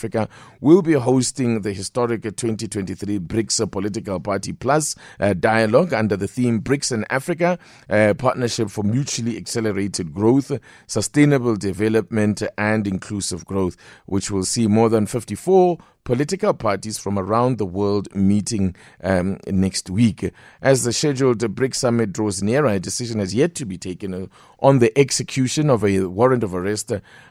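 A speech recording with nothing technically wrong in it.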